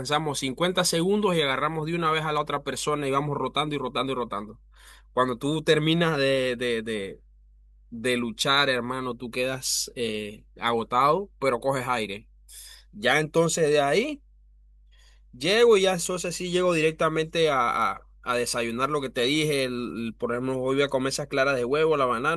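Mains hum runs through the whole speech clip: a steady low tone at 50 Hz sitting beneath the speech, at roughly 30 dB below it. Power-line current is leaking into the signal, most likely through a ground loop or a nearby transformer.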